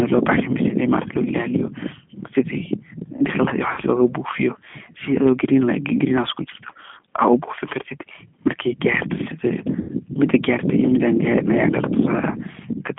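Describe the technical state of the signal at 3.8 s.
Packets went missing from about 3.73 to 3.80 s, roughly 40 ms of lost audio, which fits two 20 ms packets. The decoder filled the gap by repeating its last pitch and filter at falling gain, so the speech smears into a brief, fading buzzy tone or coloured noise. That is VoIP packet loss concealed by the speech codec. Because each frame builds on the last, the speech stays weak or distorted for a moment after 3.8 s. Underneath, the audio passes through a G.729 codec, consistent with an 8 kbit/s stream on a line band of 200 Hz to 3.4 kHz. It rebuilds the sound from a filter, a pitch predictor and a few pulses per frame, giving a plainly audible rough, synthetic quality with nothing above 3.4 kHz.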